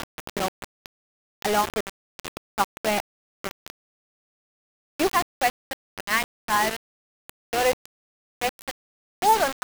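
Grainy, rasping distortion runs through the whole of the audio and shifts with it, with quiet passages collapsing into sputter or silence and the noise sitting only about 5 dB below the signal. The likely cause is low bit depth without dither, rounding to around 3 bits.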